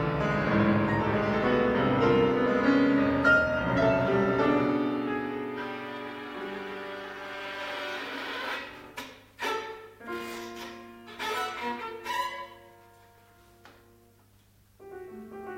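No technical faults can be heard anywhere in it.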